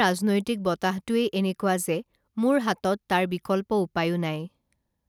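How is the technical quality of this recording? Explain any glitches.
Nothing in this speech recording stands out as a glitch, so there's nothing to explain here.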